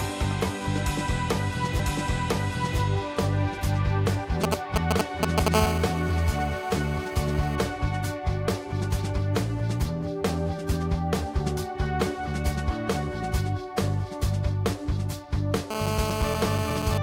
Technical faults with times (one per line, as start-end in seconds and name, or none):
4.44-5.48 GSM signalling bursts
5.54-7.56 GSM phone buzz
15.71-16.98 GSM phone buzz